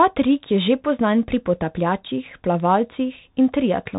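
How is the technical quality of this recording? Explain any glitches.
The recording is heavily band-limited and gritty throughout. Nothing reaches above about 3.8 kHz, so the speech sounds boxed-in and muffled, s sounds come out scratchy, and a granular hiss sits under everything. This is the Bluetooth CVSD headset codec, which fits a 64 kbps link: each sample is a single up-or-down bit with an adapting step size. Loud, fast-changing sounds outrun that step and distort, and the damage is plainly audible.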